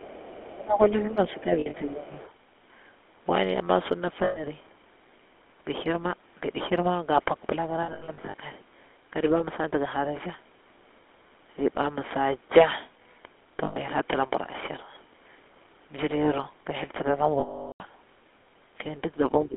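The whole clip is speech that has gone through the GSM full-rate codec, and you can hear it plainly. That old coder rebuilds the voice from a vocal-tract model driven by a sparse pulse train, so everything picks up a buzzy, gravelly edge. The line is squeezed to roughly 250 Hz up to 3.5 kHz, which leaves it thin at the bottom and dull on top.

Right from the start, up to about 2.31 s, there's a faint second voice sitting under the talker, about 25 dB down. That's the other side's voice leaking through, most likely because the talker's own loudspeaker got picked up by the mic and the echo canceller didn't scrub all of it out. It sounds like a low ghost underneath.

Over the same stretch, from 0.55 s to 2.2 s, the main voice keeps ducking, by up to around 15 dB at the worst, adding up to about a second of dips and gaps. That pattern fits speech suppressed in double talk: with both sides talking at once, the canceller can't tell its own talker from the echo and pulls everything down.

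Lost GSM frames show up five times. The first is at 1.6 to 1.81 s, about 120 ms of damage scattered in short runs, the longest around 70 ms. Then 4.24 to 4.43 s (120 ms), 7.82 to 8.34 s (320 ms in bursts up to about 100 ms), 13.64 to 13.77 s (120 ms), and 17.4 to 17.81 s, a solid 400 ms. Each time the decoder repeats the last good frame. You get a rough, metallic hold, and on the longest one it sinks to silence before the audio recovers.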